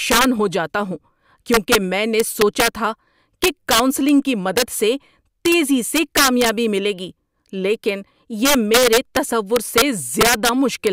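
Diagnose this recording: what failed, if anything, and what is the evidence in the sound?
Integer overflow at the sample-format conversion stage, throughout the speech. The signal is driven about 8 dB past full scale in an integer path with no saturation. Each peak that exceeds the limit wraps to the opposite sign instead of flattening. Only a small fraction of samples, under one percent, cross the limit, so the damage comes as violent cracks on the loudest syllables. Clipping would instead give a buzzy flattening. These cracks are much sharper, because each wrapped sample jumps across the whole range.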